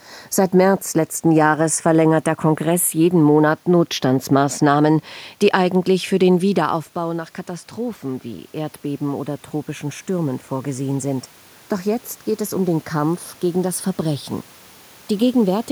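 Automatic gain rising, 6.41 to 11.33 s: after the input drops about 12 dB, gain slowly climbs about 7 dB, swelling speech and room noise together.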